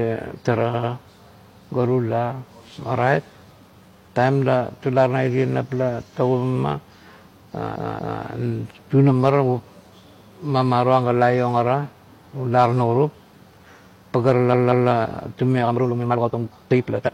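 Speech, with two kinds of fault. Repeated frames cause stutters at 0.7–0.89 s, 7.71–8.18 s and 14.49–14.86 s, where blocks of 92.9 ms, 232.2 ms and 185.8 ms each play two extra times. Unlike a skipping buffer, identical audio returns and the clip grows longer. From 15.54 s to the end the pace suddenly runs about 1.87 times faster, rushed, yet pitch stays put rather than rising as with a faster playback rate, so a time-stretched section, likely from software squeezing that stretch to fit a length, is the cause.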